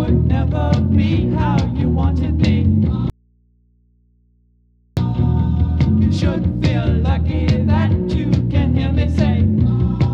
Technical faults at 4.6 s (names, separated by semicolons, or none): audio dropout to a faint residue